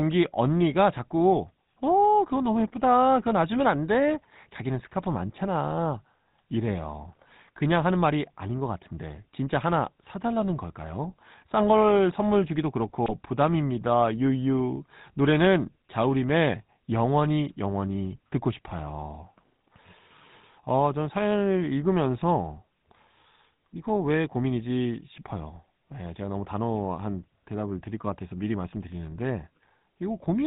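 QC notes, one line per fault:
Throughout: GSM full-rate codec. The whole clip carries a buzzy, gravelly roughness, plainly audible on every phrase. Nothing survives above 4 kHz, so sibilants sound dull and clipped. The codec rebuilds the voice from a vocal-tract filter driven by a sparse pulse train. Only every third excitation sample is kept. That coarse excitation gives the rasp. The sound fits the original 13 kbps full-rate speech coder.
13.05 to 13.12 s: GSM bit errors. A short burst of squawk and gargle breaks into the speech for about 70 ms. Flipped bits on the link reached the decoder. Corrupted filter, pitch and gain values bent the spectrum and upset the level briefly. The burst's length suggests around three 20 ms frames were damaged. That fits an error rate of roughly 1%.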